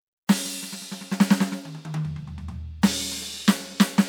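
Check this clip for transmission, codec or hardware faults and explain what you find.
Nothing here points to a transmission, codec or hardware problem; the music just runs along without any trouble worth flagging.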